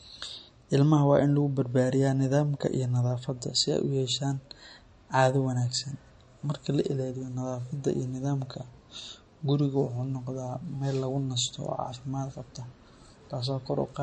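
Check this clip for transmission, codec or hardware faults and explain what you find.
One fault runs through the whole speech clip: low-bitrate audio saved at a high bitrate. Nothing is present above about 10.6 kHz, and the band below carries the artefacts of heavy MP3 coding. The likely cause is an MP3 made at a very low rate, somewhere near 40 kbit/s, later re-encoded at a generous rate such as 192 kbit/s, which cannot bring back what the first pass discarded. A spectrogram shows a flat ceiling at 10.6 kHz from start to finish.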